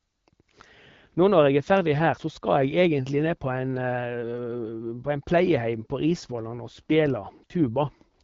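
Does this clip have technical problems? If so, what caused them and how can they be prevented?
Yes. From 6.19 to 7.76 s the speech turns rougher and more synthetic, which fits an AMR rate drop from 12.65 to 8.85 kbit/s as the link spends bits on error protection. A spectrogram keeps the same bandwidth with no gap, but harmonics smear into noisier texture. A stronger, more stable radio link would prevent it.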